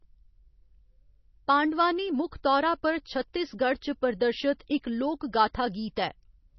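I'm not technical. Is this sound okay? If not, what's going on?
No. The speech was likely squeezed hard by MP3 compression, which throws away detail to save space. Throughout the clip everything above about 5.9 kHz is missing, so it sounds dull and muffled, with a watery, swirly quality and blurred s sounds.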